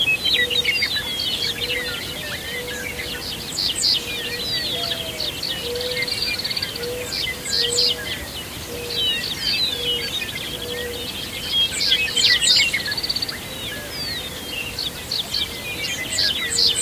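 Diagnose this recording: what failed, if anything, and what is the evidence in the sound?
Nothing in this recording points to a failure at any stage of the chain. The sounds it carries come through with nothing audible that would mark a fault.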